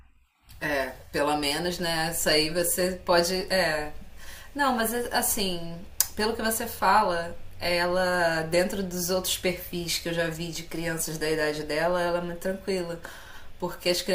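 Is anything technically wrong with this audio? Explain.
Yes. At 5.30 s the speech has a brief chirp, blip or burst of noise peaking around -25 dBFS, a corrupt frame decoded: flipped bits in what sounds like one frame misplaced energy across frequencies.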